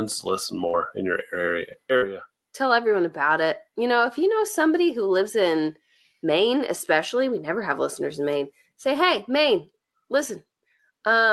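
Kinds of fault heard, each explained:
Burst of packet loss: At 0.67 to 0.75 s and 1.96 to 2.04 s, several consecutive packets failed to arrive. The decoder extended the preceding speech for roughly 55 ms while fading it, then resumed with about 60 ms of speech skipped each time.
Lost packet rebuilt from error correction: Single 20 ms frames at 0.73, 1.68, 1.72 and 2.02 s were reconstructed from Opus in-band low-bitrate copies carried in the following packet. There is no gap, but each frame sounds briefly rougher and noisier than the surrounding speech.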